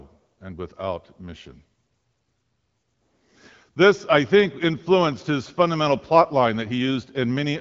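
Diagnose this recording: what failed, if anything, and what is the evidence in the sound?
Nothing has gone wrong here: the speech is carried over the AMR wideband (HD Voice) codec with no content above 7.5 kHz and the light coding texture that fits a 12.65 kbit/s rate, which is just what that path normally sounds like.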